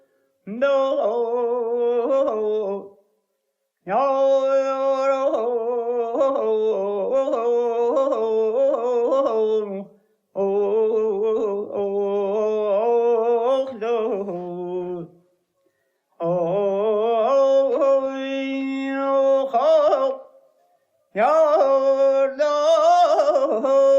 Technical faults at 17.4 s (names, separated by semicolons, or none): none